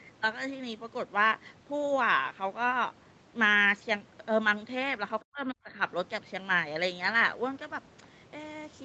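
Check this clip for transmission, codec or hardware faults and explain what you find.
One fault stands out: speech suppressed in double talk, between 5.22 and 5.7 s. The talker's level is pulled down in pieces for roughly 0.4 s in total, at its deepest by something like 40 dB. This is most likely an echo canceller that heard both sides at once, could not separate the near talker from loudspeaker echo, and attenuated everything. Unlike a packet-loss dropout, there is no robotic concealment. The audio tops out around 8 kHz, as expected for this Opus call path.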